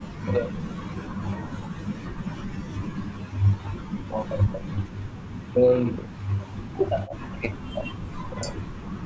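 The speech sinks and breaks up from 0.00 to 4.94 s, dips again from 5.44 to 5.75 s, and drops away once more from 5.91 s to the end at 9.05 s, falling by as much as roughly 40 dB at its deepest. That pattern is likely speech suppressed in double talk: with both ends talking together, the echo canceller mistook this talker's voice for loudspeaker echo and attenuated it along with the echo.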